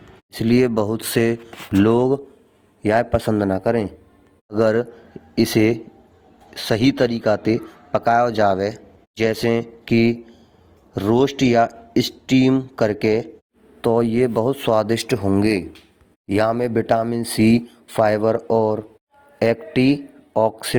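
From start to finish the speech carries plainly audible Opus compression damage, likely from a low-rate encode around 24 kbps in the music mode: band energy is kept but filled with noise, so tones turn rough and grainy, without MP3's swirling holes, and content still reaches about 20.2 kHz.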